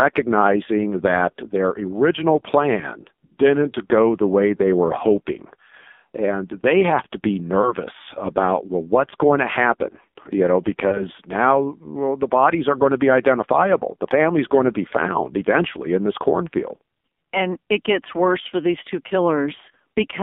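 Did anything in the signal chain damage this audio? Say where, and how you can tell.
Yes. At the codec stage, the whole clip passes through the AMR narrowband mobile codec, with heavy damage. The band runs only from 200 Hz to 3.6 kHz, and the speech is buzzy and synthetic, which fits a low mode near 5.9 kbps. A plain band-limiting filter would narrow the tone without that vocoder buzz.

In the network path, lost AMR speech frames cause two brief faults. The first is at 3.26 to 3.33 s, between "that their original plan" and "didn't go the way", which fits two lost 20 ms frames. The second is at 7.62 to 7.74 s, between "they have to be" and "about well what's going". In each, the decoder repeats its last pitch and vocal tract settings while the gain falls, so the sound smears and dips instead of cutting hard to silence the way a raw dropout would.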